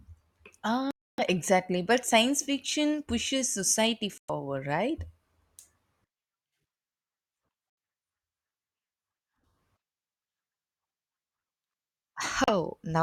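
At 0.91 s, 4.18 s and 12.44 s the speech drops to dead silence for 275, 107 and 38 ms, then resumes, most likely a Bluetooth stall where delayed packets starved the receiver's buffer. Waveform and spectrogram show flat, empty gaps with abrupt edges.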